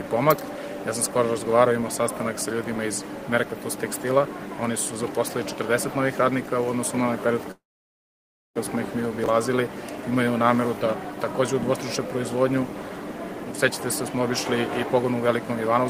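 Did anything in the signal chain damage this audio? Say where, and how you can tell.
Yes. Three kinds of damage are audible, all in the network and buffer stages of a call path.

A call audio freeze starts at 7.51 s and lasts until 8.59 s. The last sound is stretched into a short fading buzz, then almost a second of silence. The audio then resumes exactly where it stopped, so nothing is lost and the timing shifts later by about 1.04 s. The likely cause is delayed packets that let the jitter buffer run dry.

Chunks out of order occur at 9.24 to 9.28 s and again at 12.78 to 12.82 s. Each is a brief jumbled flicker. A 20 ms block of audio plays one block late, after the block that should follow it. Nothing is missing, but the swap creates three hard joins. This points to late delivery or writing of chunks in the buffer.

A jitter buffer speed-up runs from 13.45 to 14.33 s at 107 percent speed and from 14.94 to 15.85 s at 106 percent. 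The pitch stays the same, but the sound feels hurried. About 70 ms is trimmed in each stretch. The receiver does this by cutting out many short pitch-period slices to drain excess buffered audio, probably after delayed packets arrived together.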